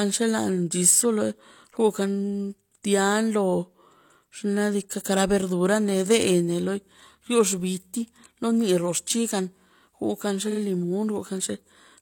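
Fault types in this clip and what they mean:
Repeated frames: The speech stutters from about 10.48 s to 10.57 s. A block of about 43 ms plays three times in a row, which fits one compressed frame being written or sent more than once. The decoder does not know the data is a copy, so it plays the same sliver of sound again. The two extra plays add 85.3 ms to the audio, and everything after the stutter arrives that much later.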